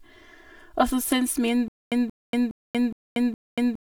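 Speech, and the whole thing has that hollow, phasey channel delay (comb filtering) sound: one channel trails the other by roughly 3 ms, so the mono sum cancels at evenly spaced frequencies, with the first notch down around 150 Hz. From 1.68 s to the end there's a stutter with silent gaps. A 178 ms fragment repeats five times, each followed by about 236 ms of dead digital silence, so it cycles roughly every 415 ms. That's likely a stalled player or stream replaying its last buffer on each retry.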